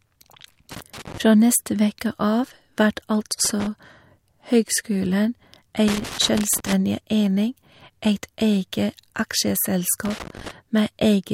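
Irregular bursts of loose connector crackle break up the speech at 0.71 to 1.18 s, 3.45 to 3.67 s, 5.88 to 6.73 s and 10.05 to 10.51 s. A worn contact is making and breaking, chopping the signal into ragged scratching rather than the clean, brief gaps of a digital dropout.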